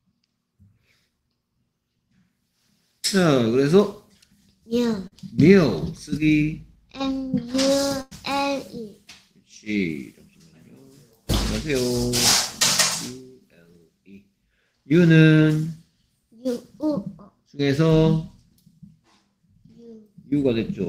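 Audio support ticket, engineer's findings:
Brief smear/wobble at 5.07–5.14 s. Short concealed packet loss: about 40 ms of audio never reached the decoder in time. Receiver's loss concealment extended the preceding sound for roughly 41 ms, then crossfaded back into real audio. Component: jitter buffer / decoder PLC.

Held buzz or fading hiss at 8.02–8.13 s, then audio resumes further on. Burst of packet loss: about 100 ms lost or arriving too late for playout. Concealment stretched the last sound for about 96 ms, attenuating as the gap continued. Intervening content is missing. Component: network path / jitter buffer, decoder PLC.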